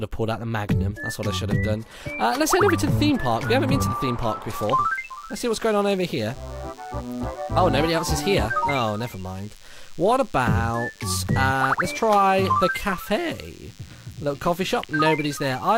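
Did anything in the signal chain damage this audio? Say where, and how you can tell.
Yes. From 4.53 s to the end of the clip a steady, thin buzz sits under the audio at roughly 30 dB below the signal, pitched at 100 Hz with a dense ladder of harmonics above it. This is DECT cordless phone buzz, picked up in the analogue wiring: a nearby DECT handset or base transmits a brief radio burst every 10 ms, and the analogue audio circuit rectifies those bursts into an audible 100 Hz pulse train.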